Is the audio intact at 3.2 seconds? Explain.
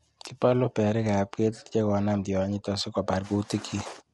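No. At 3.2 seconds, as across the whole clip, the speech sounds rough and grainy, with noise filling the gaps between harmonics. This is likely low-delay AAC compression, consistent with AAC-ELD at about 32 kbps, whose short frames blur pitch detail. A spectrogram shows smeared harmonics and nothing above 11.7 kHz.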